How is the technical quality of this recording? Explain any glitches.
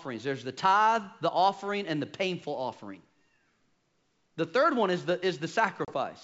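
There is one glitch, near the end of this wideband G.722 speech recording at 64 kbit/s. From 5.85 to 5.94 s, packet loss on an ADPCM call cuts a hard-edged 30 ms silence, which fits a few lost packets. The decoder's adaptive predictor and step size then drift from the sender's, so the speech returns distorted until they realign. Unlike a plain dropout, the damage continues after the hole.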